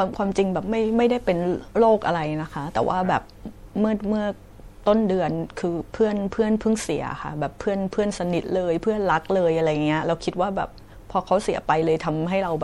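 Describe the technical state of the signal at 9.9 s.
MP3 compression at 9.9 s, as throughout the clip: dull, watery, swirly speech, likely from an encoder starved of bits, cutting treble and letting weak frequency lines flicker.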